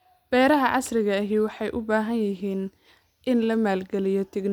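A short bit of speech with nothing technically wrong to flag anywhere in it.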